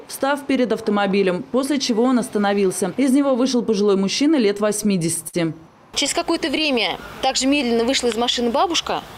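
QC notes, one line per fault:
4.57–5.36 s: repeated stalls (stutter), six short holds where late packets drained the jitter buffer; the last sound gets stretched, up to about 50 ms, so it drags.
5.99–6.62 s: repeated stalls (stutter) again, six tiny holds of up to 13 ms each, a lighter stutter, with nothing actually lost.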